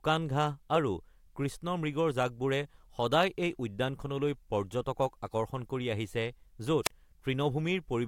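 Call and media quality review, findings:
Brief burst of hiss, then a near-silent hole, speech resuming, 6.84–6.90 s; mute portion about 35 ms. Probable component: analogue FM wireless mic link and receiver. Mechanism: wireless microphone squelch dropout. RF signal faded below threshold, so receiver squelch gated the output, leaving the short gap before the carrier recovered.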